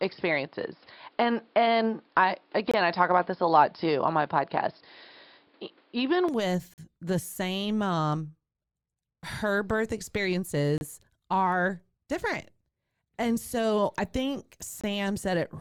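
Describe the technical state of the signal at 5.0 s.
At 5.0 s the input has likely switched to a poorer device, from the start until 6.29 s. It passes nothing above 5.3 kHz, so the speech sounds dull, carrying its own noise some 40 dB down and a level shift of around 5 dB.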